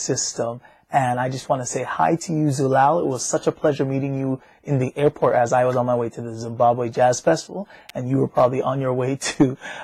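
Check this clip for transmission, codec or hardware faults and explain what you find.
One fault turns up. At 7.89 s there's an electrical switching spike, a sharp snap peaking around -20 dBFS, likely a nearby switch arcing and getting picked up on the line.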